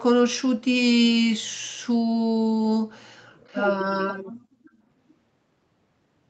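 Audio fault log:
3.38 to 3.68 s, echo leak: a faint, delayed copy of the speech comes back about 436 ms late, very quiet, roughly 30 dB below the voice. It is likely a loudspeaker on the far end whose echo canceller let a scrap of its own pickup return.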